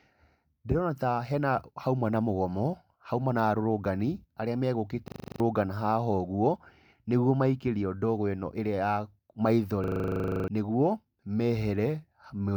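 At 5.08 to 5.4 s and again at 9.84 to 10.48 s, a system hang loop repeats one 40 ms slice exactly, a rigid 25 Hz rattle, unlike a dropout's silence, while roughly a third and two-thirds of a second of speech vanish.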